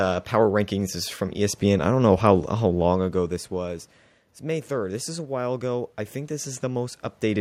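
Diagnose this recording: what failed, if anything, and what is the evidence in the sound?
From 4.75 s to 7.05 s the speech and the room noise behind it swell together, climbing about 4 dB gradually. This is automatic gain rising in the call processing: the input level fell by about 13 dB, and the gain control slowly raised its gain to compensate.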